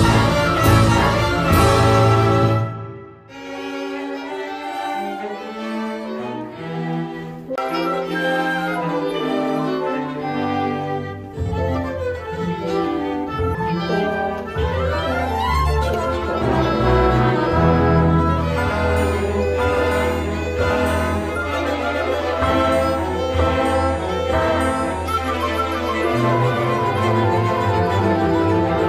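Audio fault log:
7.56–7.58 s and 13.55 s, CD skip: the laser jumps tracks, giving a tick and a short mute, about 20 ms then a brief flicker, before playback resumes elsewhere.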